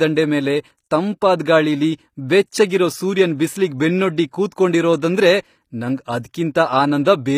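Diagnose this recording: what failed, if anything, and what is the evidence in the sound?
The failure sits at the codec stage, where the speech was most likely squeezed through HE-AAC compression at a low rate, consistent with roughly 24 kbps in the v2 mode. The damage is plainly audible across the whole clip: the core coder keeps only the lower spectrum and the upper band is synthesised by copying lower bands upward under a coarse envelope, so sibilants come out gritty and metallic, harmonics fail to line up in the treble, and nothing reaches above 15.5 kHz.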